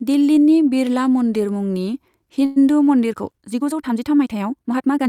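Packets were likely delayed long enough for the jitter buffer to run dry, producing a call audio freeze from 2.45 to 2.58 s. The receiver fills about 110 ms with a fading buzz continuing the last sound, then the speech resumes where it stopped, with nothing lost but the flow broken.

From 3.07 s to the end, a time-stretched section was likely produced by software squeezing the audio to fit a shorter length. The speech suddenly runs about 1.48 times faster at the same pitch, and dropped fragments make it rushed.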